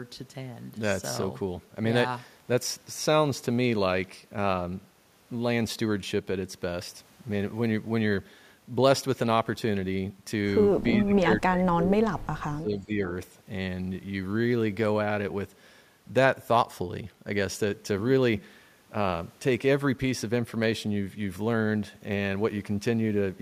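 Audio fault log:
11.03 to 12.99 s, speech suppressed in double talk: the speech dips here, sinking by as much as around 30 dB at its deepest, with roughly a second and a half of the stretch affected in total. It's likely that both ends were talking at once, so the echo canceller couldn't tell the near talker apart from the loudspeaker echo and ducked everything together, which is why the speech gets pulled down.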